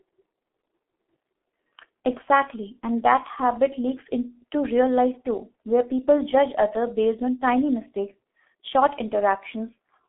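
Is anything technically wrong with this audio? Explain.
Yes. Throughout, the speech has passed through a G.723.1 codec, a low-rate telephony coder that models the voice in 30 ms frames and discards everything above about 3.8 kHz. The result is muffled, hoarse speech with smeared consonants, which fits a bitrate near 6.3 kbit/s.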